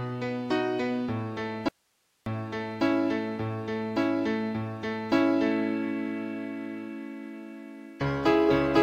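From 1.69 to 2.26 s the sound drops out abruptly for about 580 ms, leaving only faint hiss roughly 45 dB down: an audio dropout to a faint residue, likely a brief loss of signal upstream. The waveform collapses to a thin noise band, and the spectrogram shows a sharp-edged gap of diffuse hiss.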